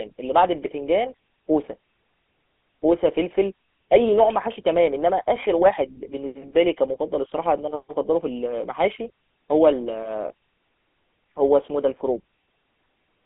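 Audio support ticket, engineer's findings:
Buzzy, gravelly roughness on speech throughout, nothing above 3.8 kHz, band roughly 250 Hz to 3.5 kHz. GSM full-rate codec, pulse-excited vocal-tract model, fits 13 kbps.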